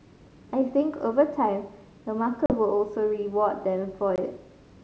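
At 2.46 s and again at 4.16 s, packet loss on an ADPCM call cuts hard-edged holes of about 40 ms and 20 ms into the speech. Each shows as a flat gap on the waveform and a blank vertical stripe on the spectrogram, followed by slightly distorted speech that settles as the decoder's predictor re-syncs.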